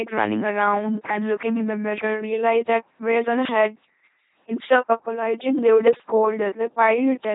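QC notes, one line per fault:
Throughout, LPC-10 vocoder: heavily buzzy, robotic speech. Each moment is rebuilt from pulses or noise through a short filter. Nothing above 3.8 kHz.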